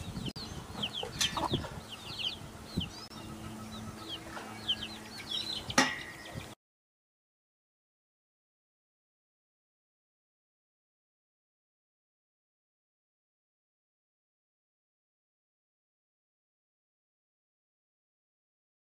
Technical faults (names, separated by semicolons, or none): Bluetooth stall